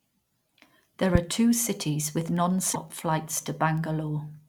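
From 0.28 s to 4.37 s the speech carries word clock ticks: sharp clicks at a steady pace of roughly one every 0.3 s, about fifteen in all, some louder than others. The receiving device is reading the digital link on its own clock, which drifts against the sender's by something like 70 parts per million. At each slip one sample is dropped or repeated. On a spectrogram each tick is a thin vertical line spanning the whole frequency range, evenly spaced. On the waveform each is a one-sample step.

Between 2.73 s and 2.76 s the audio briefly jumps and is disturbed for about 30 ms. This is likely a broken MP3 bit reservoir. A stretch of frames was lost, and the next frame reached back for borrowed bits that now belonged to a different frame. It decoded garbage before the stream recovered. The length fits about one 26.1 ms frame. On a spectrogram it shows as a short block that breaks from the surrounding speech harmonics. 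On the waveform it is a brief, abrupt discontinuity.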